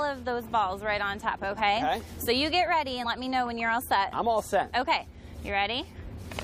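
At 3.03 s the audio jumps ahead by about 50 ms: compressed frames skipped, a couple of 23.2 ms frames never decoded.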